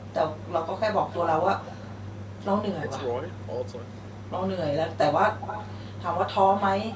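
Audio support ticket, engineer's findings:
Speech suppressed in double talk, 2.80–2.89 s: short dip of about 10 dB over roughly 100 ms. Likely echo canceller ducking the near talker during overlap. It is a level drop with no repeated copy, unlike echo.

Echo leak at 3.28–3.38 s, 5.29–5.75 s and 6.81–6.96 s: delayed copy of the speech returning 255, 264 and 269 ms later. It is about 35 dB down at first, about 10 dB down in the longest stretch, and about 15 dB down at the end. Likely residual loudspeaker pickup passing the far-end canceller. A consistent delay of roughly a quarter second distinguishes it from room reverb.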